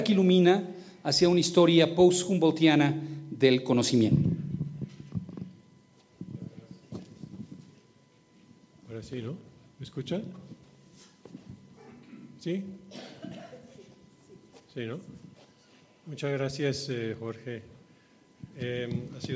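No technical faults are audible; the sound carries the expected signature of call microphone processing, with the lowest bass trimmed by its high-pass filter and nothing above 8 kHz.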